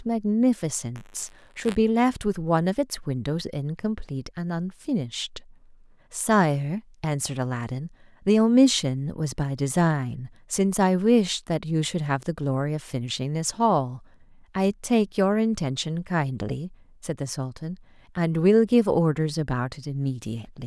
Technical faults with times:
0.95-1.75 buffer tearing

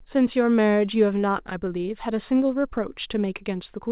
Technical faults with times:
none

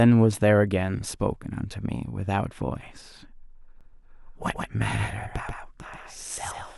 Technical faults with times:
3.81-6.78 doubled audio track

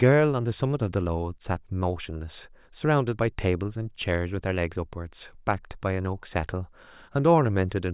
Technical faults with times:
none

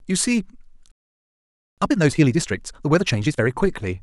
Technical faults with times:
0.92-1.78 playback stall
1.78-3.50 time-compressed catch-up

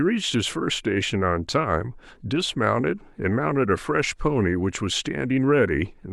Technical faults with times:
none

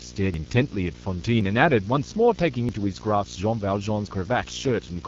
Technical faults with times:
0.00-5.07 video or display buzz
0.00-5.07 AMR wideband (HD Voice) codec
0.34 dropped buffer (overrun)
1.41 dropped buffer (overrun)
2.69 dropped buffer (overrun)
4.07 dropped buffer (overrun)

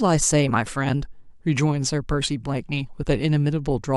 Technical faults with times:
none

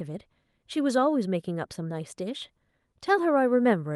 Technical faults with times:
none

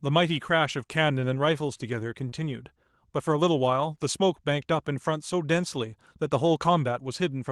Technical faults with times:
0.69-0.71 lost packet rebuilt from error correction
2.29-2.34 short concealed packet loss

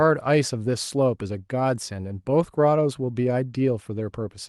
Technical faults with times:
none

